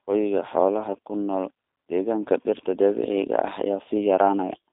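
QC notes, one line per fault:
Throughout, G.729 codec: speech sounds narrow and rough, nothing above about 3.6 kHz, with a synthetic buzz from pulse-coded excitation, unlike plain band-limiting, which stays smooth.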